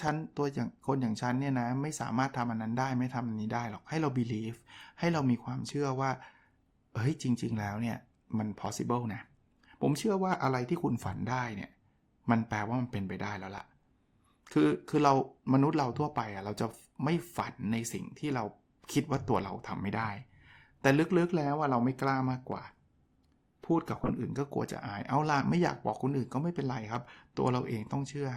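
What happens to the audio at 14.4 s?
Nothing goes wrong at 14.4 s; the speech continues intact through that moment, with no dropout, click, or other audible fault.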